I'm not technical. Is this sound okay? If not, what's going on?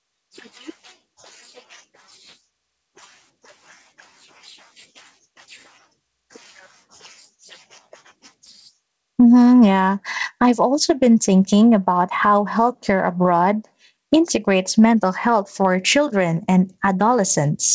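No, there's gain pumping all through the speech: loud and soft parts end up closer in level and the sound is squashed, most likely from the mic level set too high.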